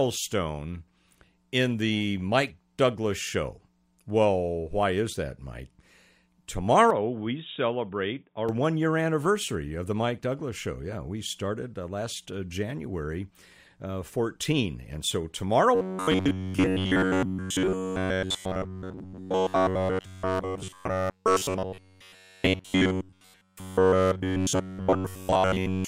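From 6.90 to 8.49 s, just before "one year anniversary of", the speech turns dull and boxy, its band narrower, and it drops about 5 dB in level, with a new background noise sitting about 50 dB below the speech. There is no gap at the change, and the fuller sound returns at 8.49 s. The likely cause is an input switched to a poorer device, such as another microphone or a headset's call profile, bringing its own restricted bandwidth, tone, gain and noise floor for that stretch.

From 15.75 s, right after "so tomorrow", to the end of the recording, the speech becomes a rigid, metallic buzz at 93.8 Hz that only roughly tracks what is being said. Practically all of this stretch is made of repeats. This is robotic sound from repeated short buffers, the likely cause being audio arriving too late, so the software keeps replaying the last chunk of about 10.7 ms while fresh audio is lost.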